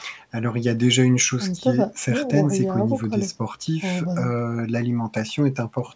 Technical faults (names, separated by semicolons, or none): none